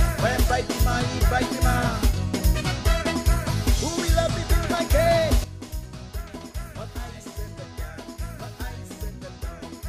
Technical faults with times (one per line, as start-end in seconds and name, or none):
5.44-9.88 sudden gain jump